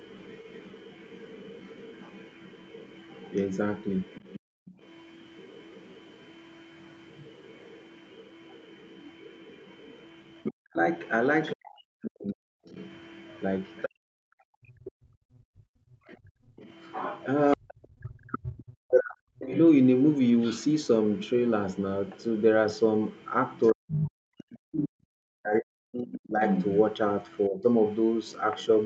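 From 0.0 s to the end of the clip, a faint second voice sits under the main talker, roughly 25 dB down. It is most likely the other side's voice leaking through: the far end played on a loudspeaker and reached the microphone, and the echo canceller left a residue instead of removing it.

At 4.4 to 4.65 s the room sound drops by about 36 dB and then returns. This is background gated by the echo canceller. While the loudspeaker was active, the canceller clamped the microphone path, so the ambience briefly vanishes into near silence.

From 10.5 to 13.92 s the talker's level falls by as much as 40 dB, about 1.5 s in total. The likely cause is speech suppressed in double talk: both ends spoke together, and the canceller, unable to separate the near talker from the echo, attenuated both.

From 14.2 to 16.56 s the background is gated again, dropping by about 34 dB for roughly 2 s in total.

The same double-talk suppression returns at 17.55 to 19.55 s and again at 23.72 to 27.66 s. 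Each time the talker dips or cuts out for roughly 2 s in total, with drops of around 40 dB.

Inside that last stretch, at 24.89 to 24.96 s, a brief 70 ms gate pulls the room sound down by about 40 dB.

All of this sits within a band that stops at 8 kHz, as expected from the call microphone processing and the Opus call path.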